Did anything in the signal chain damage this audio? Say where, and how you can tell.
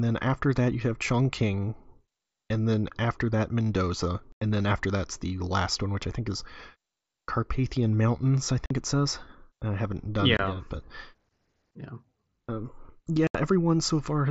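Yes: unconcealed Bluetooth headset packet loss on the wireless link between headset and phone. The speech drops out with hard edges at 4.32–4.42 s (90 ms, before "then after that's the"), 8.66–8.71 s (45 ms, before "it says I haven't"), 10.37–10.39 s (22.5 ms, between "says I haven't done" and "it yet but") and 13.27–13.35 s (75 ms). Lost voice packets were replaced by silence or an idle pattern, not concealment, across the mSBC wideband link.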